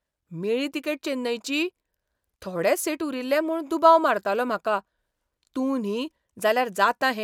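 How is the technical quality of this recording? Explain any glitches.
Nothing stood out as a glitch or technical problem on listening to this speech recording.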